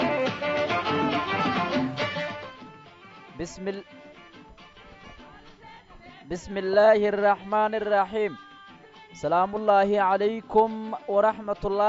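Listening closely, nothing in the audio stood out as a technical problem.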